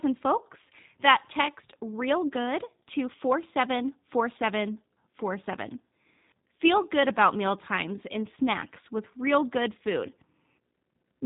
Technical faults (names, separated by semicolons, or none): G.729 codec